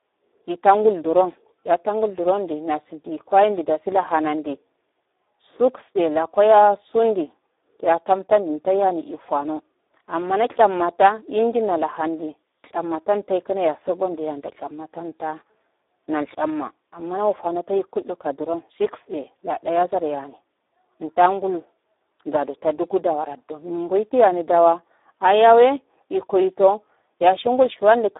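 From start to finish the speech sounds hoarse, grainy and thin, squeezed into a 300 Hz to 3.7 kHz band with nothing above 3.8 kHz. This is heavy Speex codec damage: the coder starves its excitation of bits, which fits a rate around 8 kbps.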